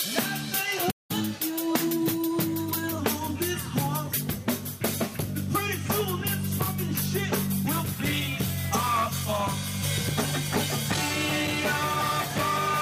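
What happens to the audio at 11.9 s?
Nothing goes wrong at 11.9 s; the audio plays through that moment intact, with no dropout, click or distortion.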